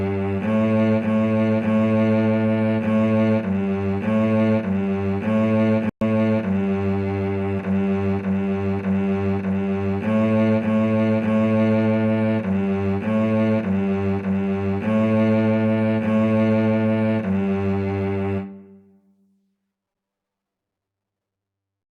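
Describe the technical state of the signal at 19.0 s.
Around 19.0 s the signal is intact, with no dropout, clipping, distortion or other fault at that moment.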